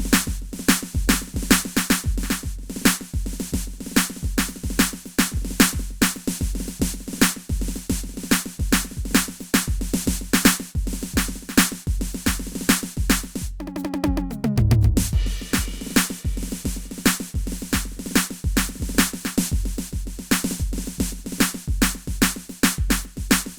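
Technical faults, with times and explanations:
No technical faults can be heard in this music.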